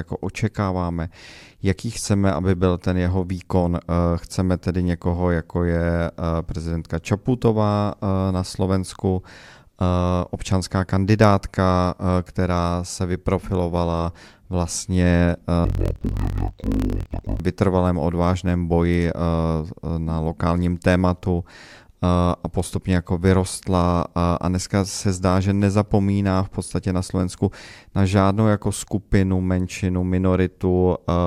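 From 15.65 to 17.42 s, between "která se vyprofilovala vlastně" and "vytrvalém odvážném boji", interleaved audio is read as planar: each 26.12 ms block of alternating left and right samples gets split in half, with the first half taken as left and the second as right. Every half is then stretched to fill the whole block, so the speech drops an octave, sounds doubled, and chops with a buzz at about 38.3 Hz, the block rate.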